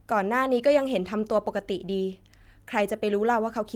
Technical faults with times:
none

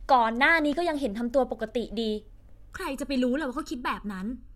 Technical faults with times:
2.73-4.55 channel delay (comb filtering)

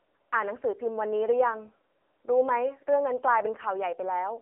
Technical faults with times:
0.00-4.42 AMR narrowband mobile codec

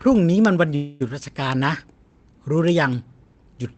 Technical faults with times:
0.75-1.02 call audio freeze

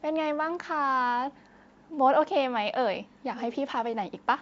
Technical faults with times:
none

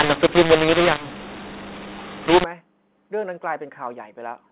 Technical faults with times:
0.00-2.44 mu-law and A-law mixed up

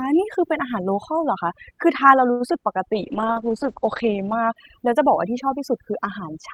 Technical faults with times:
0.00-6.54 overdone noise removal
2.31-2.42 short stall from a late packet
2.48-2.56 short concealed packet loss
2.94-4.62 call bitrate drop

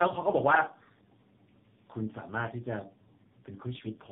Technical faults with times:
0.00-4.12 tandem speech coding

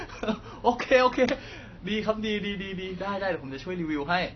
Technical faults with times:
0.00-4.35 AAC compression

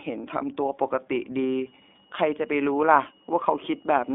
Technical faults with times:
0.00-4.14 iLBC codec
1.66-4.14 switching supply whistle

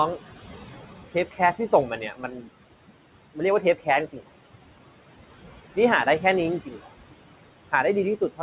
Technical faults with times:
0.00-8.42 noise suppressor artifacts
1.98-2.49 speech cut by the noise suppressor
3.62-3.87 speech cut by the noise suppressor
4.13-4.22 speech cut by the noise suppressor
6.65-6.87 speech cut by the noise suppressor

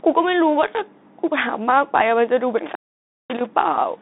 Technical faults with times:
0.00-4.02 Bluetooth CVSD headset codec
2.58-3.46 intermittent contact

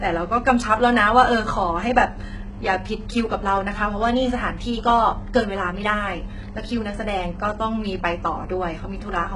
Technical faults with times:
0.00-9.36 HE-AAC compression

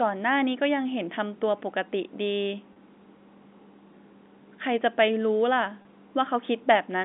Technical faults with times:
2.73-2.76 packet loss with pitch repetition
5.82-5.85 packet loss with pitch repetition

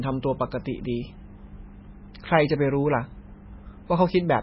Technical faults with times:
0.00-4.42 MP3 compression

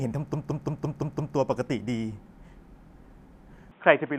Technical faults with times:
0.34-1.37 system hang loop
3.71-4.18 input switched to a poorer device

